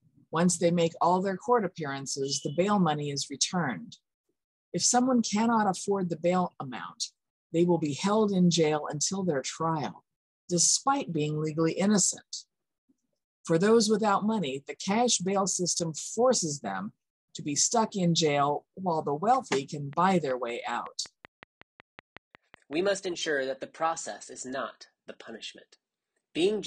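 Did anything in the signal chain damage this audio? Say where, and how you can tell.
Yes. A train of clicks runs from 19.93 to 22.74 s: about fifteen evenly spaced pops at 5.36 per second, standing around 5 dB above the sound. Their regular pace likely points to the analogue wiring stage, with interference, a faulty connection, or a power-supply fault injecting repeated pulses.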